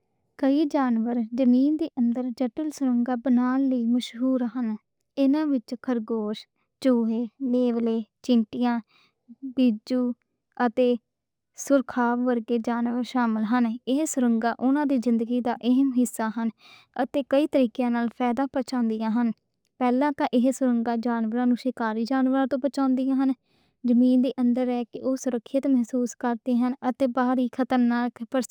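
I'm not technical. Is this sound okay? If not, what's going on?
No, not quite. Throughout the speech there is imaging from linear upsampling. The audio was converted to a higher sample rate by joining neighbouring points with straight lines, which fits a doubling from 24 kHz to 48 kHz. That dulls the very top, and leaves a faint mirrored copy of the sound between 12 kHz and 24 kHz, heard as a light metallic shimmer on hissy sounds like s. Unlike codec swirl, it stays steady rather than bubbling.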